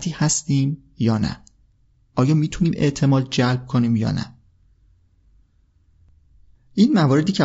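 Across the whole speech clip the voice is rough and grainy, with a hiss-like texture filling the gaps between harmonics and a top band that sounds thin and synthetic. The damage is plainly audible and fits likely low-delay AAC compression (AAC-ELD) at around 32 kbps, where short frames resolve pitch poorly. A spectrogram would show smeared harmonic lines, noise between them, and a blotchy, patchy upper band.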